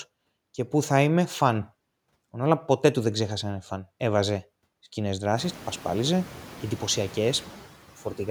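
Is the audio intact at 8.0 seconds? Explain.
No. Noise suppressor artifacts run throughout the clip, including 8.0 s. The suppressor cuts what it reads as steady noise by about 11 dB, band by band. With the room noise risen, from around 5.5 s, the noise sinks between the words and rises under them. A gate would switch the whole signal instead.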